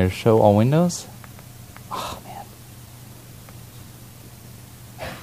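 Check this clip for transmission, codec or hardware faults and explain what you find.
No faults can be heard anywhere in this clip. Nothing in the sound calls for an explanation.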